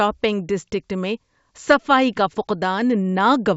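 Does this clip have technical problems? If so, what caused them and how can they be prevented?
No, no technical faults here.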